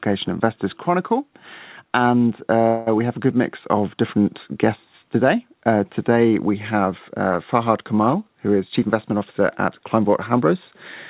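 At 2.68 s the speech holds on the last sound as a fading buzz or hiss for about 0.2 s, then picks up with "we have a good". That's a call audio freeze, likely from delayed packets draining the jitter buffer. Nothing gets lost, but roughly 184 ms of extra delay goes in.

From 8.60 to 10.52 s there's a jitter buffer speed-up. The receiver snips out short pitch-period chunks over and over to shed the built-up delay, about a fifth of a second in total. The speech runs around 109% speed at unchanged pitch and sounds a bit rushed. Throughout, the narrowband call path leaves nothing above 4 kHz, which fits G.711 at 64 kbps.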